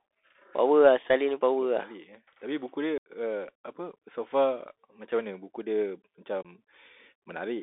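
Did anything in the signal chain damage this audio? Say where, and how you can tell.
Yes. The codec stage is a Bluetooth CVSD headset codec, likely on a 64 kbit/s link. Its one-bit delta coding confines the speech to 300 Hz to 3.6 kHz and adds granular hiss and scratchy sibilants.

On the wireless link, unconcealed Bluetooth headset packet loss drops audio to abrupt silence at 2.98 to 3.10 s (about 80 ms), 3.96 s and 6.42 to 6.46 s.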